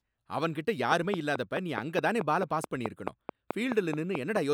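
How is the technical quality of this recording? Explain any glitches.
The recording has one clear fault. A train of clicks runs from 0.92 s to 4.37 s. About fifteen sharp pulses arrive at a steady 4.65 per second. Each stands roughly 15 dB above the speech. The likely cause is interference from nearby equipment or a faulty connection or power supply. It is heard as an even ticking over the voice and in its pauses.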